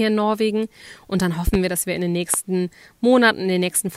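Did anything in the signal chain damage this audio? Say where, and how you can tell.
Yes. Loud pops sit on top of the speech: a double thump at 1.47–1.57 s, before "wir dass wir in", and a single pop at 2.34–2.37 s, after "dass wir in den", peaking roughly 10 and 15 dB above it. These are likely voltage steps in the analogue wiring, from a plug, switch or static.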